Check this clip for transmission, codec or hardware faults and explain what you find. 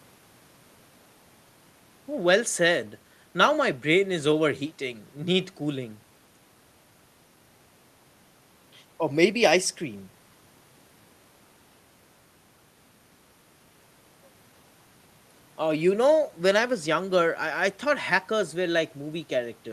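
Nothing in the recording points to a fault in how the speech was captured or carried. No point in the clip calls for comment.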